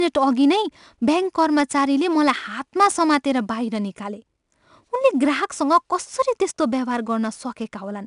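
Throughout the speech, 4-bit ADPCM compression codes each sample as a coarse 4-bit step from a running prediction, and adapts the step size as it goes. The coding error becomes a gritty hiss riding on every loud syllable, rising and falling with the level, and plainly audible. Consonant attacks roughen. Nothing reaches above about 10.6 kHz, which fits a sample rate near 22 kHz and a rate of roughly 89 kbps, so the top end sounds dull.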